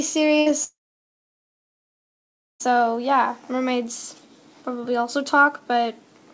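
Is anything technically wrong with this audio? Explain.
Yes, there are two clear interruptions, both consistent with network packet loss.

From 0.40 to 0.48 s the sound briefly smears into a short held buzz or hiss that fades, then picks up again slightly further along. This is a burst of packet loss: roughly 60 ms of audio never arrived in time, so the receiver stretched out the last sound it had and lowered it to cover the hole. When the stream resumed, the missing stretch was simply skipped.

From 0.64 s a much longer break begins. The sound first trails off as a fading buzz or hiss, then from shortly after drops to silence for about 1.9 seconds before returning at 2.62 s with around two seconds of material missing. The likely cause is a long network dropout. Nothing arrived for that whole stretch, so concealment could only extend the last sound for a moment before giving way to silence, and the audio rejoined later without the lost portion.

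Throughout, the content above 8 kHz is absent, which fits a G.722 call codec.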